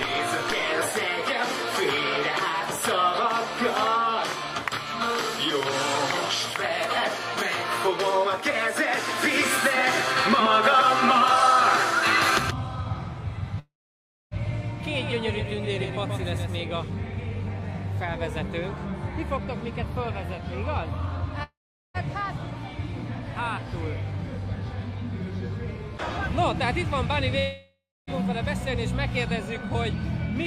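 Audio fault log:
9.08–16.59 s, doubled audio track: a second full-band copy of the same audio runs about 150 ms behind the original and about 5 dB quieter. It has no reverberant tail or room colouring and cuts in and out abruptly at both ends of the stretch, which gives a flat, slapback-like smear rather than an echo. The likely cause is a second, slower capture path feeding the same mix, or an edit that left two offset copies in place.
13.59–14.34 s, 21.43–21.97 s, 27.39–28.10 s, long network dropout: three gaps lose about 0.72 s, 0.52 s and 0.68 s of audio, likely because packets stopped arriving. In each gap the receiver stretches the last received sound into a fading buzz or hiss. That fill gives way to silence for roughly 0.61 s, 0.41 s and 0.25 s respectively. The audio then resumes further along, with the missing portion skipped rather than delayed.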